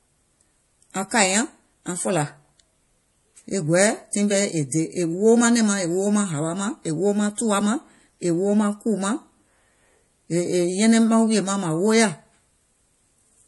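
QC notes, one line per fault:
Throughout, MP3 compression: the encoder was likely starved of bits, at a rate that fits roughly 48 kbps. It cut the treble at a fixed point, leaving nothing above 11.5 kHz, and dropped weak frequency lines that flicker in and out between frames. The speech loses its top-end air and crispness, and the flickering leaves plainly audible codec damage: a watery, swirling texture laid over the whole clip.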